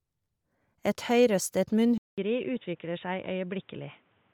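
From the first moment, the speech appears to have been carried through Bluetooth LC3 compression, likely a low-bitrate LE Audio link. The transform codec discards much of the upper spectrum and fills the gaps with synthetic noise, which fits a rate around 48 kb/s with 10 ms frames. The damage is plainly audible: consonants and vowels carry a breathy, grainy sheen.

At 1.98 s the input switched to a poorer device, likely a second microphone or a headset call profile. Switching drops about 200 ms of signal, leaving a clear silence. After that, nothing comes through above 3.8 kHz, so the speech turns dull and boxy. Level drops by roughly 5 dB, and a new noise floor sits about 35 dB beneath the speech through to the end.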